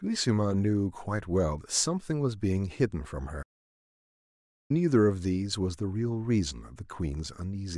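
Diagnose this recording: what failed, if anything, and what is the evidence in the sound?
The playback stage failed with a playback stall. The speech stops mid-flow at 3.42 s and stays silent until 4.71 s, a gap of about 1.27 s. It then resumes. The likely cause is the player running out of data or its thread being blocked.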